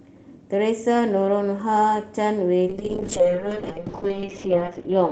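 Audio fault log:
2.65–5.12 s, call bitrate drop: from 2.65 s to the end, the speech turns rough and watery and loses its top end, worst for about 1.6 s. The encoder was given far fewer bits, which fits a fall from 32 to 8 kbps. It codes more coarsely and cuts the highs that the call path had carried up to 8 kHz. Unlike packet loss, nothing drops out or stutters. The sound stays continuous, just coarser and duller.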